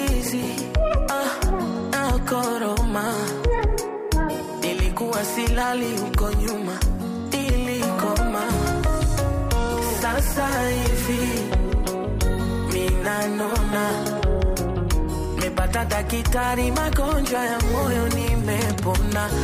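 No dropouts, clicks, distortion or timing disturbances turn up anywhere in the audio.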